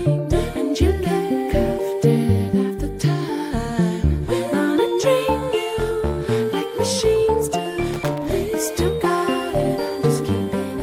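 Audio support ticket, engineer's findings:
Irregular burst of crackle and scratching, 7.94–8.26 s, about 0.3 s. Loose connector crackle: worn or dirty contact making and breaking intermittently, chopping the signal. Check cable/jack.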